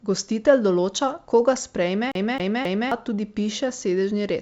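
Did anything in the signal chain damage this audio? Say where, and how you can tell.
Yes. A CD stuck on one turn, a playback fault, runs from 2.12 to 2.92 s. The same 0.27 s slice of speech repeats three times, each with a brief mute at the jump. A scratch throws the laser back one track on every revolution, giving that even stutter.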